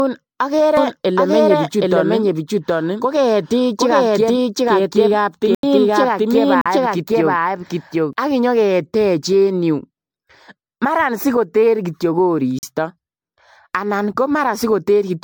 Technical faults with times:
0.00-15.23 generation loss
0.77-8.13 doubled audio track
5.55-5.63 block of digital silence
6.61-6.66 block of digital silence
12.59-12.63 block of digital silence

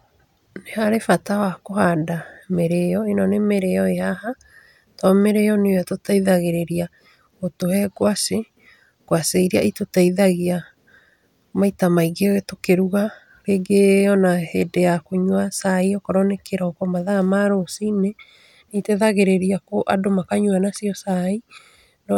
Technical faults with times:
none

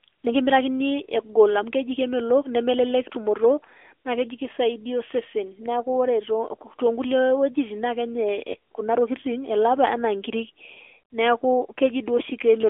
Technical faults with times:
0.00-12.70 AMR narrowband mobile codec
8.52-8.56 lost AMR speech frames

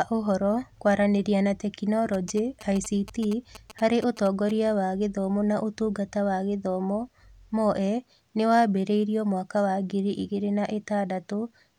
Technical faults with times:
2.14-4.51 GSM signalling bursts

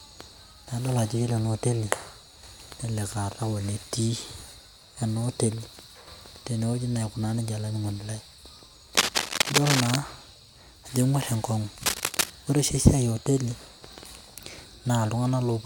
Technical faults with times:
8.97-9.96 cable scratch noise
11.78-12.30 cable scratch noise

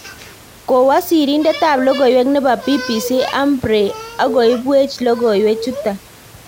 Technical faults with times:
none

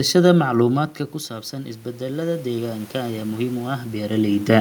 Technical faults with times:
1.52-4.61 automatic gain rising

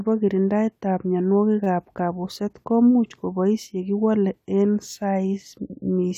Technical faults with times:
1.64-1.66 repeated buffer

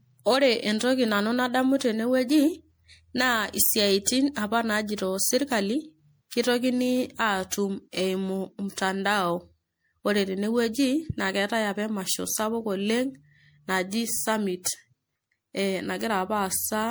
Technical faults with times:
0.00-16.90 generation loss

